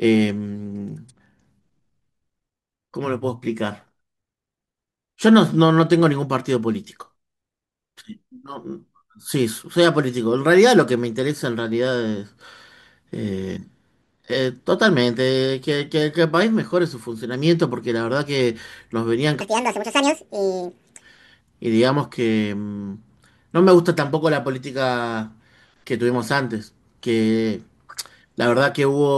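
A section at the wrong speed runs from 19.41 to 21.01 s in this speech recording. For that stretch the audio plays about 1.77 times faster than it was captured, so pitch and tempo rise together: the voice jumps up by roughly ten semitones and sounds hurried and chipmunk-like, then drops back to normal. The likely cause is that this segment was played back or edited against a mismatched clock rate.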